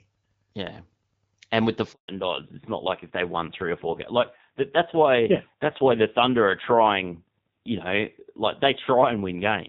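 A short speech recording whose call audio breaks at 1.92 s with a handover gap lasting about 160 ms, until 2.08 s. The call was passed from one network to another, and no speech frames arrived while the link was re-established, so the sound fades out within a few tens of milliseconds and falls to silence. On the waveform this shows as an abrupt flat stretch. On a spectrogram it is a clean vertical blank band across all frequencies. From 2.08 s to the end there is a fallback to narrowband. Before the break, energy reaches up to roughly 7 kHz, as expected from the AMR wideband (HD Voice) codec at 12.65 kbit/s with light coding damage. After it, the spectrogram is cut off sharply at 4 kHz, leaving an empty band above that line. The speech sounds duller and rougher, which fits a switch to a low-rate AMR narrowband mode around 5.9 kbit/s.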